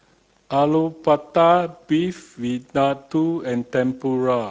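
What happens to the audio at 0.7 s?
At 0.7 s the speech carries Speex codec damage, as it does through the whole clip. This CELP codec has too few bits to model the excitation. The speech turns plainly noisy and hoarse, which fits a bitrate near 16.8 kbps.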